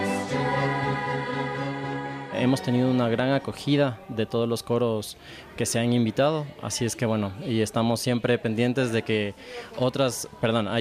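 Nothing in the audio stood out as a technical problem on listening.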